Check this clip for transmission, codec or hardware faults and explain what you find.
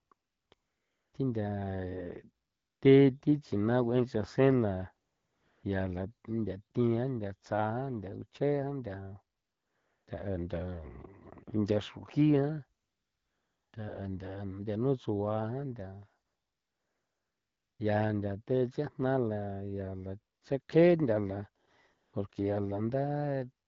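One fault is present: AMR comfort noise, recurring through the speech clip. There are fourteen silent stretches between 0.0 and 23.68 s, ranging from 20 ms to 1.54 s. The longest are at 16.25 to 17.79 s and 12.81 to 13.73 s, and another runs from 0.53 to 1.13 s, just before "thi ntha". During each gap the phone stopped sending speech frames, and the receiver substituted smooth synthetic noise built from a coarse level-and-spectrum description. The real background is replaced by a steady hiss that switches in and out. The coding itself sounds clean, consistent with AMR-WB at about 12.65 kbit/s.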